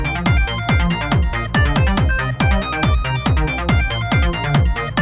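A recording of sounds, with no technical faults audible anywhere in the signal.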